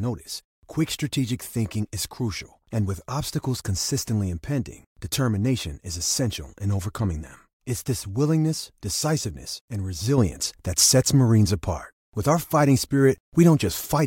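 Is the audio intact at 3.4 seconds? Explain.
Yes, the speech at 3.4 seconds is intact, with no dropout, click, distortion or other fault audible at that moment.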